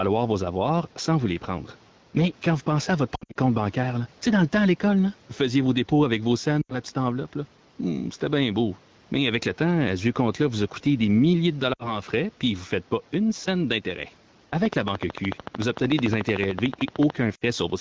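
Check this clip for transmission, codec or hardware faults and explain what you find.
Three kinds of fault turn up here: gain pumping, lost AMR speech frames and a train of clicks.

Gain pumping runs through the whole clip, with a swing of around 5 dB. That's likely a gain set too hot for the mic, with a fast limiter clamping it on every peak, so the dynamics sound squashed.

The lost AMR speech frames come in four spots. From 3.15 to 3.37 s, about 160 ms goes missing, scattered over 200 ms, with the longest run 60 ms. From 6.61 to 6.77 s, between "dépôts avec vos scènes" and "petite enveloppe", 80 ms is lost. From 11.73 to 11.99 s, between "coûté des milliers de" and "frais puis vous ne", 60 ms is lost. From 17.35 to 17.44 s, another 60 ms is lost. In each case the decoder papers over the failed frames by replaying the last good pitch and vocal tract settings at falling gain. The sound dips, then comes back thin or rough for a moment.

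The train of clicks starts right after "pas une scène d'intérêt" and runs from 14.66 to 17.11 s. It's roughly 30 near-identical clicks at a regular 13.5 per second, peaking around 15 dB above the speech. It sounds like steady ticking over everything, likely interference from nearby gear or a faulty connection.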